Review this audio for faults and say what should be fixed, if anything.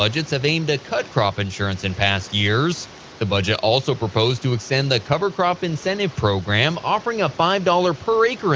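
No faults; nothing needs fixing.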